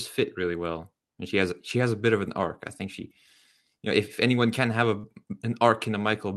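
At about 4.99 s, a short concealed packet loss occurs, lasting until about 5.06 s. Roughly 40 ms of the call arrived too late or not at all. The receiver patched the gap by extending the preceding sound, then blended back into the real signal. It is heard as a brief smear in the speech. The audio passed through a call codec with its top end cut near 12 kHz, which fits Opus at a moderate bitrate.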